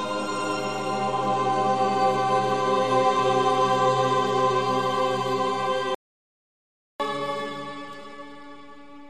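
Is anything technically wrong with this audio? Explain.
Yes, there are two faults.

From 5.95 s to 7.00 s there is a playback stall: the sound cuts out mid-flow for about 1.05 s, likely because the player ran out of data. Unlike a dropout, it resumes where it stopped, with nothing skipped.

From 7.00 s to the end, catch-up at higher speed follows. The player works through its backlog at 1.1 times normal speed, so the sound runs faster and about a semitone and a half higher. Unlike a time-stretch, pitch rises along with tempo.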